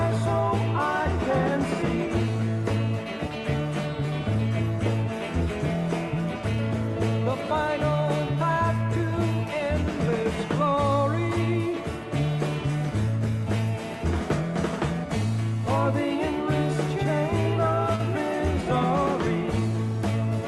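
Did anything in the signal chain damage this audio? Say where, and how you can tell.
Yes, there's a short concealed packet loss on the network leg of the call, around 17.95 to 18.02 s. Roughly 40 ms of audio didn't reach the decoder in time, so the receiver filled the gap by extending the sound just before it, then crossfaded back into the real signal. You hear a brief smear or wobble there. The top end stops around 12 kHz throughout, which fits a mid-rate Opus call.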